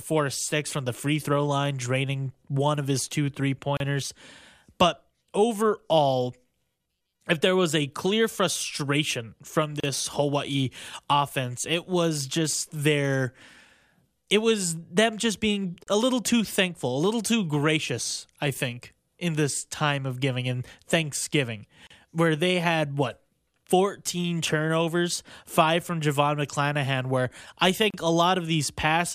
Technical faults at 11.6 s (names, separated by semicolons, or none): none